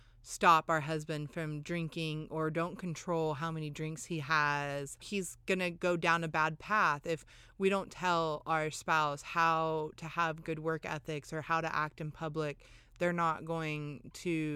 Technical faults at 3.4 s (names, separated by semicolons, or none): none